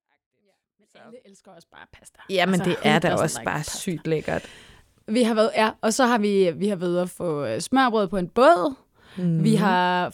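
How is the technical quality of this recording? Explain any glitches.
No glitches in this speech recording: the level comes up in a smooth, edited fade-in from the very beginning to 2.64 s, with no click or hard edge, and nothing else needs flagging.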